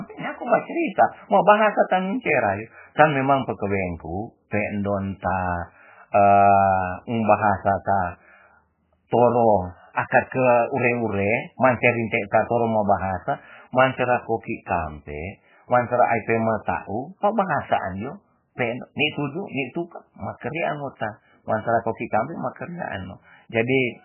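From start to finish, the speech has no treble above 3 kHz and sounds watery and swirling. This is likely MP3 compression at a very low bitrate.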